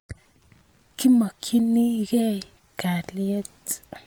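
From start to end, the speech has a plainly audible breathy, grainy edge on its upper detail, where the finer high-frequency texture sounds noise-like. This is likely Bluetooth LC3 compression, in a form that fits a 48 kbps setting with 10 ms frames. Parts of the upper spectrum are rebuilt from filled-in noise instead of being kept exactly. Unlike a plain low-pass or narrowband link, content still extends to about 20.2 kHz, so the damage is the grain rather than any missing top end.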